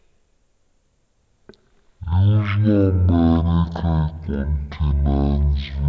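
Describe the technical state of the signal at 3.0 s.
At 3.0 s, as throughout the clip, the speech has a wrong sample rate: it plays at 0.363 times normal speed and about 17.6 semitones low, which fits 44.1 kHz material played at 16 kHz. Pitch and tempo drop together, unlike a time-stretch or pitch-shift.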